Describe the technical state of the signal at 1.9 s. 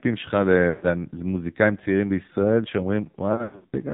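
At 1.9 s the speech is still inside the AMR narrowband mobile codec damage that runs through the whole clip. Everything above 4 kHz is gone, and the vocal-tract model, rebuilt from a few pulses in each 5 ms, makes the voice buzzy and synthetic, which points to a very low rate near 5.9 kbps. A spectrogram shows a flat, empty ceiling at 4 kHz, with smeared, frame-stepped harmonics beneath it.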